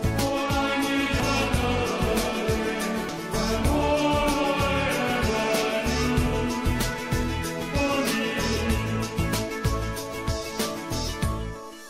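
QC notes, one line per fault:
1.20 s and 3.09 s: damaged data in a compressed stream. Corrupted bytes make the decoder misread frames and resync, giving a brief glitch lasting a few milliseconds each time.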